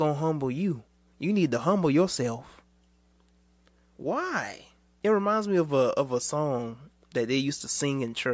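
Listening to the speech recording, nothing stood out as a technical problem at any point.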